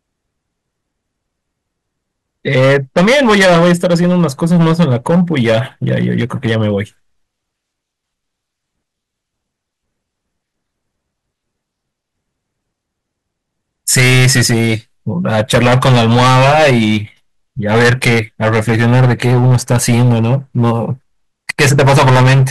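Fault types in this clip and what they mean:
Hard clipping: peaks driven beyond what a stage can pass get sliced flat, with about 14 to 17 dB of overdrive here, so loud passages of the speech turn to harsh fuzz rather than occasional crackle, recurring from 2.48 s onward. Unlike soft saturation, the edges are abrupt and buzzy.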